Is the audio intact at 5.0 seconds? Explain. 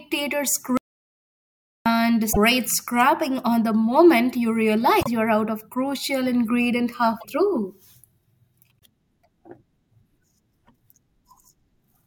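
No. Between 5.00 and 5.07 s, after "on the moment you" and before "you're out of crucial", the audio jumps ahead and garbles briefly. This is likely a broken MP3 bit reservoir: frames that lost their borrowed data decode from the wrong bytes. Unlike a clean dropout, the content skips forward.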